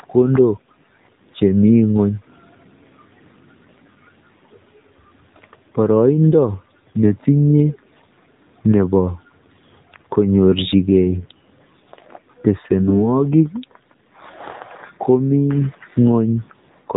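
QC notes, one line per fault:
Throughout: AMR narrowband mobile codec. The speech sounds thin and boxed-in, with a buzzy, synthetic edge and nothing above 4 kHz. The 8 kHz narrowband coding removes the upper band, and a low rate, consistent with about 7.4 kbps, rebuilds the voice from a sparse pulse-driven vocal-tract model.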